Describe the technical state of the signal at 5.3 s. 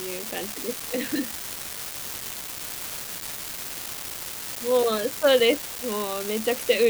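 At 5.3 s an unreliable data bit, present throughout, randomly flips, adding identical spikes of about -18 dBFS, heard as a steady crackling fizz over the speech and pauses.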